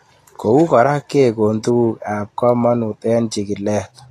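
From start to finish, the speech carries a grainy, hissy edge. Tones sound roughened and attacks blurred. Nothing reaches above 14.2 kHz. This is likely Vorbis compression at a low setting, and the damage is plainly audible. The encoder keeps a smooth outline of the spectrum. It then spends too few bits on the treble detail above it. That detail turns into noise of similar energy. The texture fits a bitrate near 32 kbps.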